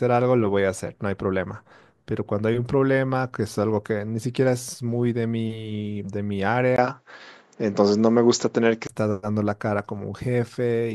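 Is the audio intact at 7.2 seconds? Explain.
No. From 6.76 to 8.89 s the speech turns duller, with nothing above 7.6 kHz, a level shift of roughly 5 dB, a faint new noise floor, and a 20 ms gap at the switch. This likely reflects the input switched to a poorer device.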